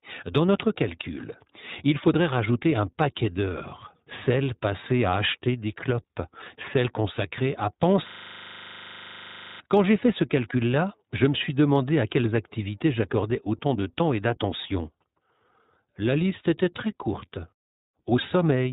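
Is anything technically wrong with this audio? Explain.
Yes, there are two faults.

Throughout the clip the speech sounds muffled and a little rough and synthetic, with plainly audible codec damage and nothing above 4 kHz. This is iLBC codec coding: each 20 ms frame's excitation is coded on its own, and the 20 ms frames fit the 15.2 kbps mode.

From 8.08 to 9.60 s, right after "clopes celles consacrées à", the same 40 ms snippet repeats about 38 times, giving a rapid 25 Hz stutter. This is a system hang loop: the system froze while the sound hardware kept replaying one short ring buffer.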